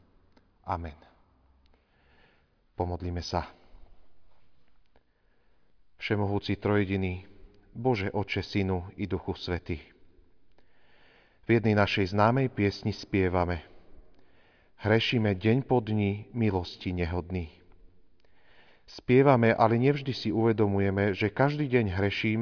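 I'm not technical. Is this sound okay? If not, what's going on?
Yes, this speech recording sounds fine, with no technical problems to point out. There is nothing here that needs fixing.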